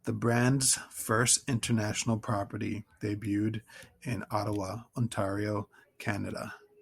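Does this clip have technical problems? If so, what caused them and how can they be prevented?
No, nothing technical is wrong with this one, so there's no cause to track down and nothing you need to do differently next time.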